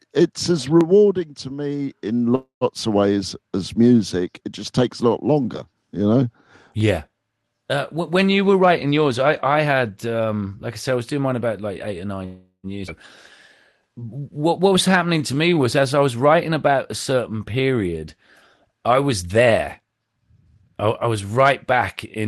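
A speech recording carried over a call path whose Opus coding, band-limited to about 12 kHz, fits a rate near 24 kbps, with several timing faults. Dropped samples give single sharp clicks at 0.81 s (between "it's as" and "to me in"), 6.81 s and 14.77 s. Each is likely a loss of under a millisecond, too brief to remove any sound, unlike a skip. Call audio freezes at 2.35–2.64 s (after "to me in", before "of ways as music") and 12.25–12.66 s stretch the last sound into a fading buzz, the first reaching about 110 ms of silence. They likely come from late packets draining the jitter buffer, and nothing is lost afterwards. A skip ahead at 12.87–12.91 s jumps straight past roughly 0.2 s of speech with almost no gap, so material vanishes rather than being paused. Jitter buffer speed-up hurries the speech without raising pitch at 8.58–10.72 s (112%, from "when you were" to "I said I was"), 15.93–17.20 s (107%) and 19.22–21.73 s (111%), as repeated pitch-period cuts drain excess delay. 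Jitter buffer slow-down at 13.82–15.55 s does the opposite, repeating periods to add 169 ms and drawing speech out to 91% speed at unchanged pitch.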